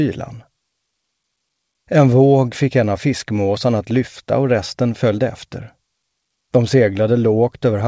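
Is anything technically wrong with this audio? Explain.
No, nothing is technically wrong with this audio.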